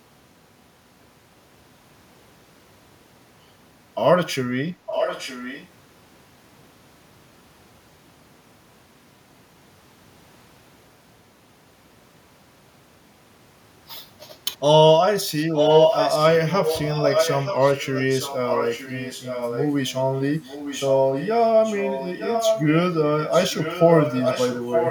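Echo leak at 4.86–5.67 s, 15.54–19.94 s, 20.35–21.28 s, 21.64–22.69 s and 23.07–24.9 s: the speech returns 0.91 s late, only slightly quieter (noticeably fainter in the third stretch), likely because a loudspeaker-side echo canceller passed its microphone pickup back.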